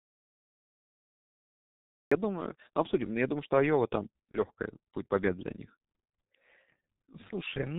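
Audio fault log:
throughout, G.723.1 codec: The whole clip runs through G.723.1 at 6.3 kbit/s, and the damage is heavy. Nothing gets through above 4 kHz, so the speech comes out muffled with no air on top. The codec builds its picture of the voice from 30 ms chunks and only updates it slowly, which gives that hoarse, grainy edge and smears consonants into each other. Sibilants and plosives lose their crispness and blur into the vowels around them.
0.00 to 2.12 s, audio dropout to silence: The clip opens in a dead gap that's already going when the recording starts. It's silence, with no room tone or hiss underneath, and then the speech cuts in abruptly at about 2.1 s. That complete absence of any noise floor points to the input being lost rather than someone just not talking. A dropped connection or a mute is the likely cause, with the encoder writing silence until the signal came back.
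4.31 to 4.37 s, VoIP packet loss concealed by the speech codec: There's a brief glitch where the speech is stretched into a fading tone for a moment. It fits one lost 30 ms packet. The decoder covered the hole by repeating its last pitch and spectral shape at falling gain, so you hear a short smear instead of a gap. Because each frame builds on the previous one, the voice stays a bit weak just after the loss, so the disturbance runs to about 60 ms in total.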